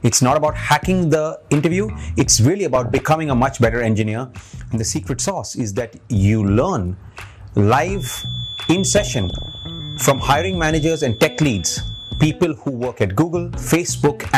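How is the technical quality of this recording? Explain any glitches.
The technical quality is poor, with damage throughout and several distinct glitches.

MP2 compression: Throughout, the sound is dull with a gurgling, granular texture and flickering highs. This likely comes from MPEG Layer II coding at a low rate, about 80 kbps, switching off upper sub-bands.

DAB burbling: From 2.75 to 3.03 s and from 8.97 to 9.70 s, burbling distortion breaks out. Bit errors from weak reception corrupt frames, putting short blips of noise into single sub-bands.

One channel drops out: From 4.02 to 6.16 s and from 12.52 to 13.01 s, the sound abruptly drops by 6 dB. The likely cause is losing one stereo channel, leaving only the remaining side.

Feedback whistle: From 7.91 to 12.40 s, a thin, steady 3.4 kHz whistle wavers in the background, well below the main sound. This is likely a speaker-to-microphone loop hovering at the edge of feedback.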